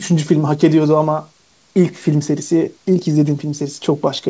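The speech has the ordinary character of a call connection: the microphone processing trims the lowest bass, the codec adds its usual coding noise, and nothing lies above 8 kHz, a band limit that fits a wideband codec such as G.722 at 64 kbps, with no technical fault to be heard.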